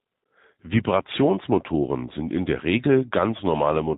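G.729 coding runs through the whole clip: the speech has been rebuilt from a vocal tract filter, a pitch predictor and a few pulses per 10 ms frame, which fits an 8 kbit/s stream. Nothing above 4 kHz survives, so it sounds muffled, rough and plainly synthetic.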